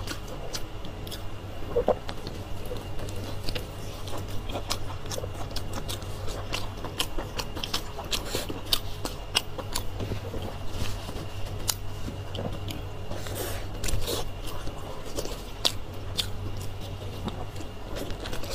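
The signal carries no detectable technical faults at any point in the recording.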